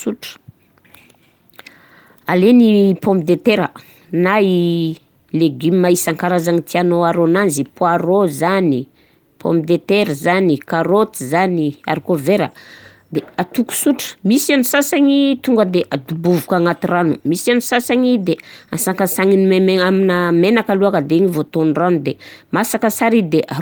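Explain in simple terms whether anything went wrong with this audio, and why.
Nothing went wrong; the recording sounds as intended.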